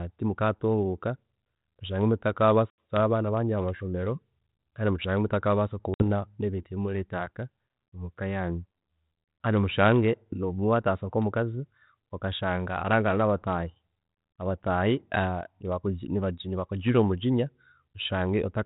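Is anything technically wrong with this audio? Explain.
Yes. At 2.70 to 2.97 s and again at 5.94 to 6.03 s, the speech drops into abrupt, hard-edged silence, about 80 ms and 60 ms long. When it resumes, it comes back slightly distorted, and this settles within a few tens of milliseconds. This is packet loss on an ADPCM call. A few packets went missing each time and were filled with silence. The decoder's adaptive predictor and step size then no longer matched the sender's, so it took a short while to resynchronise. The light, level-following coding noise throughout fits G.726 ADPCM at 32 kbit/s.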